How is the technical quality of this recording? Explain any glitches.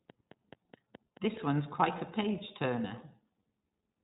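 The recording's technical quality is compromised by two problems: heavy low-bitrate codec coding for the whole clip, and a short burst of regular clicks near the start.

From 0.10 to 1.38 s, just before "one's quite a", a train of clicks ticks over the speech at about 4.7 per second, evenly spaced. There are roughly seven of them, each a few decibels louder than the speech. The likely cause is electrical interference or a faltering interface injecting the same pulse repeatedly. Their identical shape and steady pace continue through the pauses, which separates them from mouth clicks or crackle that follow the talking.

Throughout, the speech carries iLBC codec damage. Nothing above 3.8 kHz survives, so consonants sound dull. The excitation is coded independently in 20 ms frames, which gives the voice a clearly rough, synthetic edge, consistent with the 15.2 kbps mode. Unlike a plain low-pass filter, this adds a buzzy, artificial texture on top of the missing treble. 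Unlike packet loss, the damage is continuous rather than in dropouts.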